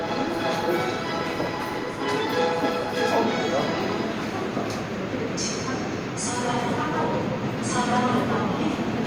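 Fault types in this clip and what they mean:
Nothing stood out on listening to these sounds.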